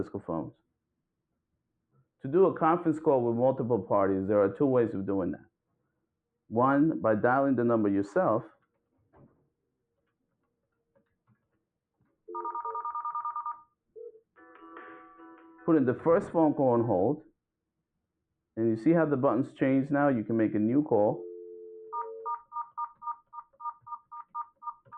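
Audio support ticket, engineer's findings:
Sound cut by the noise suppressor at 1.9–2.24, 5.7–6.05, 8.49–11.12, 21.72–21.93 and 24.56–24.91 s. The suppressor treats sustained sound as noise and pulls it down by about 17–22 dB (only about 7 dB at 21.72), while transients pass. That separates it from a dropout.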